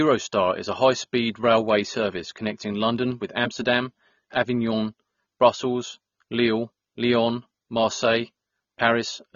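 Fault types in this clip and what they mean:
AAC compression: a coarse, low-bitrate encode, likely around 24 kbps AAC-LC, discards everything above 6.9 kHz, leaving the speech dull and smeared throughout.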